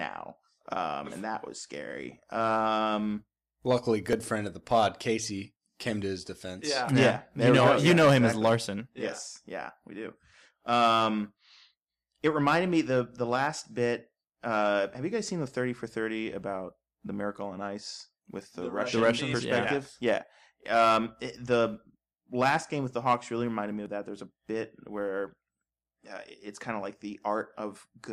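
At 4.13 s and again at 23.86 s the speech jumps forward, with no gap of silence. Each is likely a dropped buffer (overrun): samples were overwritten before being read, so a slice of about 10 ms, then around 20 ms, vanished and the edges were butted together. On the waveform the trace steps abruptly mid-cycle; a spectrogram shows a thin vertical broadband line at each joint.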